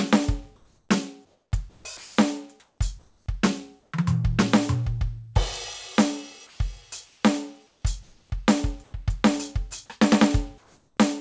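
From 0.56 to 3.26 s, and again at 3.80 to 3.92 s, 6.47 to 8.30 s, 8.84 to 8.93 s and 10.58 to 10.97 s, the quiet background between the musical passages turns into a flat, featureless hiss. This is likely comfort noise in place of the background: the sender stopped transmitting during what it judged to be silence, and the receiver synthesised shaped noise to fill each gap.

Inside the first stretch, from 1.97 to 2.18 s, 210 ms of the music itself disappears under that steady noise and then returns. This is likely sound dropped by the voice detector, which mistook the music for background and cut transmission.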